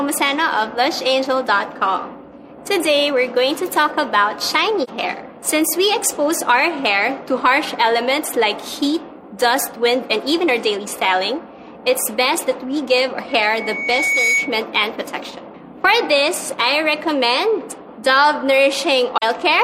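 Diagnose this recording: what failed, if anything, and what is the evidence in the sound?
Codec stage: AAC frame loss with muting produces soft-edged dips of about 43 ms at 4.83 and 19.18 s, consistent with a single lost frame each, zeroed and crossfaded by overlapping windows.

Acoustic playback loop: loudspeaker feedback squeal at 13.28 to 14.61 s, a 2.2 kHz tone building over roughly a second to about 5 dB above the signal.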